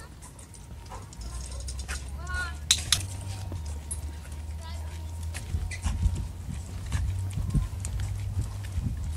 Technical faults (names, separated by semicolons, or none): skip ahead; jitter buffer speed-up